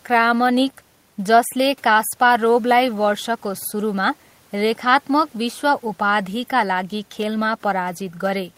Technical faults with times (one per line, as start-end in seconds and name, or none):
none